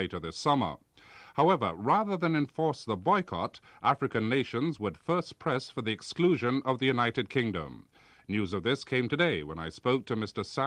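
No technical faults are audible.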